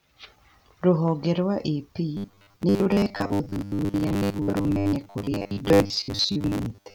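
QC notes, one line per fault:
2.17–6.94 s, robotic sound from repeated short buffers: audio likely arrived too seldom, so a 10 ms buffer looped over most of the stretch, leaving a rigid 100 Hz metallic buzz.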